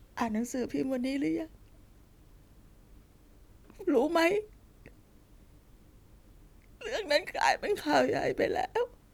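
No technical faults can be heard anywhere in this recording.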